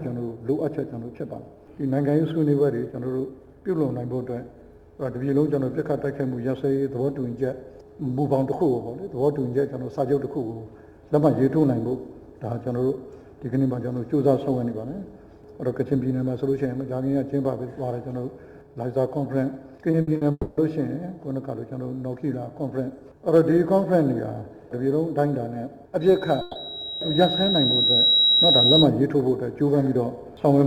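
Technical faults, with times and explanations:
19.91–19.95 s and 20.17–20.23 s, short concealed packet loss: about 20 ms and then 40 ms of audio never arrived in time, and the receiver extended the preceding sound to bridge each gap, leaving brief smears.
20.01–20.09 s, burst of packet loss: roughly 60 ms of consecutive audio went missing, so the last sound is held and fades before playback resumes slightly further on.
20.31–20.59 s, long network dropout: about 260 ms is replaced by a fading continuation of the preceding sound, ending in roughly 30 ms of silence, likely because the network stream stopped arriving.
26.01–28.88 s, loudspeaker feedback squeal: a 3.8 kHz tone swells over about two seconds to about 5 dB above the audio, as the microphone re-amplifies the loudspeaker at that frequency.
26.41–26.57 s, burst of packet loss: within the squeal, 140 ms is bridged by a held, decaying copy of the preceding sound, and the audio jumps ahead when it resumes.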